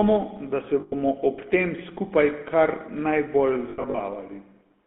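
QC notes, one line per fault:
Throughout: GSM full-rate codec. The speech has that buzzy, gravelly GSM roughness, plainly audible, and sits in a narrow line band of roughly 200 Hz to 3.5 kHz. It sounds consistent with 13 kbps full-rate coding, where the vocal tract is modelled and driven by sparse, regularly spaced excitation pulses.
0.80–0.93 s and 3.70–4.00 s: lost GSM frames. The first drop comes right after "da se" and before "ob tem skupaj kar". There the sound freezes into a metallic ring for about 120 ms while the last good frame repeats. The second follows "tem skupaj kar najbolj". It has about 160 ms of losses scattered over 280 ms, in short bursts of around 70 ms at most, so it sounds choppy rather than one long hold.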